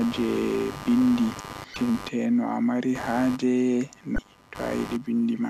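Running under the whole speech is computer activity noise: a buzzy, scratchy pulsing at around a hundred pulses a second, roughly 15 dB below the voice. It follows the computer's load rather than the speech, as processor and peripheral activity disturbs the audio circuit's shared ground.

At 1.73 to 1.76 s and again at 4.15 to 4.18 s, brief glitches mark damaged data in a compressed stream. Corrupted frames there were misread by the decoder, which lost sync and hunted for the next valid frame header before playback resumed.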